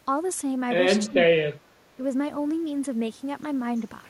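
Speech suppressed in double talk appears from 1.07 to 1.57 s, where the speech sinks sharply, by about 25 dB at its deepest. A second, shorter and milder dip of about 10 dB follows from 1.95 to 2.02 s. The likely cause is an echo canceller that heard both ends talking at once, could not separate the near talker from loudspeaker echo, and attenuated everything it picked up.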